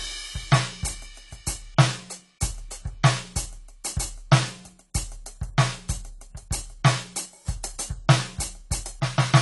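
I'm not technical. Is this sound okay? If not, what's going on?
No, not quite. The whole music clip sounds dull and smeary, as if heard through a thin blanket, because everything above 11.5 kHz is gone. Sustained sounds and crisp, hissy edges take on a plainly audible watery, fizzy wobble. That's likely AAC compression squeezed too hard: the file was shrunk so much that the encoder dropped the top end and left gaps in the sound, and that texture runs from start to finish.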